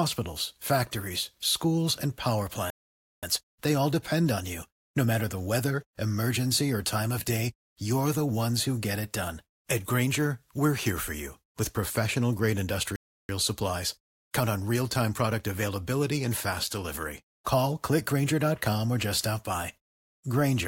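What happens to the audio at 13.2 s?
A playback stall silences the speech from 12.96 to 13.29 s, right after "you with professional grade", likely because the player ran short of data. The waveform flatlines and the spectrogram shows an empty vertical gap.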